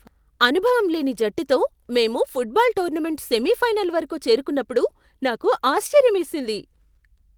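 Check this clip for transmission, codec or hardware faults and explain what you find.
The speech carries two linked timing faults that run almost the whole length of the clip.

Clock drift between sender and receiver is present throughout. The sender's clock runs roughly 4 percent fast, so the receiver's jitter buffer keeps overfilling. Unlike jitter or packet loss, this gives no silent gaps or garbled bursts, only a steady mismatch.

Repeated timing corrections run from 0.05 to 7.29 s, with the sound running at 104 percent speed. To drain the excess, the receiver keeps trimming short pieces, always in the same direction but at uneven spacing. The result is faint hiccups and a slightly hurried, unsteady tempo rather than isolated dropouts.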